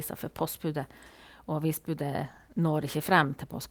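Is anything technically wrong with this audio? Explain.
Yes. From 2.19 s to the end there is a call bitrate drop. The encoder, starved of bits, sounds as if it fell from about 64 to 17 kbps for 1.17 s, coding coarsely and trimming highs. The speech turns muffled and watery without the gaps that packet loss would leave.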